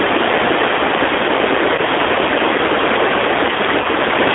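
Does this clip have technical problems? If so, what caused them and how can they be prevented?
Yes. Throughout, the speech sounds thin, slightly rough and synthetic, confined to roughly 300 Hz to 3.6 kHz. That is the G.729 codec at 8 kbit/s, rebuilding each 10 ms frame from a vocal tract filter, pitch predictor and a few pulses. Using a wideband codec such as G.722 or Opus prevents this.

At 1.75 to 1.81 s and 3.81 to 3.87 s, the sound briefly smears into a buzzy tone or coloured noise that fades, and stays weak or distorted just afterwards. This is VoIP packet loss concealed by the speech codec. About 30 ms went missing each time, consistent with a single lost packet, so the decoder extrapolated from its last frame and its output recovered only gradually. A more reliable network path with forward error correction or packet redundancy prevents this.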